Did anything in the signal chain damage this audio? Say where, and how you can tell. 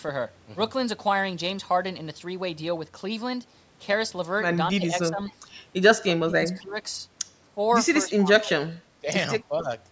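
Yes. The call processing stage dips the speech at 4.77–4.94, 5.1–5.19, 6.08–6.37, 6.55–6.85, 8.03–8.76, 9.02–9.07 and 9.48–9.67 s, by about 5 to 30 dB, deepest in the 6.08–6.37 s stretch. This is likely speech suppressed in double talk: the echo canceller mistook the talker for loudspeaker echo.

An echo leak also comes from call processing, at 5.29–5.33 s. A brief copy of the far-side voice, about 35 dB below the speech, returns 264 ms late. The likely cause is the echo canceller passing on residual loudspeaker pickup it failed to remove.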